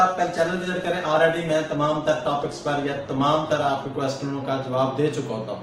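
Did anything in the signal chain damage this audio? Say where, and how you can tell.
Yes. An adaptive stream starting at a low bitrate (codec/network stage): from 0.0 to 4.0 s, treble stops near 12.4 kHz, with stronger codec artefacts, then quality jumps seamlessly.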